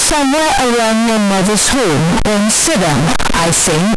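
Samples stored as 32-bit float were most likely read back as 32-bit integers, a float read as integer fault running through the whole clip. Each sample's sign and exponent bits now dominate its value, so the waveform collapses into a near-square shape sitting at an almost fixed, high level regardless of the original level. The speech turns extremely loud and harsh, with background noise brought up to match it, though the pitch contour still comes through.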